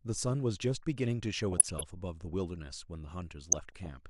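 Throughout the speech, the coding has clearly run short of bits, most likely MP2 compression at a low rate around 80 kbps. Upper sub-bands drop out and flicker while the rest are coarsely quantised, leaving the voice dull with a granular, gurgling edge. From 1.52 to 1.83 s and again from 3.50 to 3.88 s, DAB burbling appears. Bit errors slip past error correction, which fits an error rate of roughly 0.4 to 0.5 percent, and corrupted sub-band levels jump for up to a frame at a time, with short blips of noise in single sub-bands over the speech.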